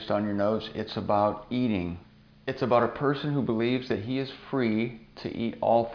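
No technical faults can be heard anywhere here.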